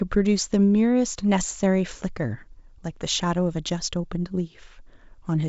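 Nothing goes wrong anywhere in this speech recording, which comes over a G.722 wideband telephone link at 64 kbit/s, with any trace of that coding faint at most.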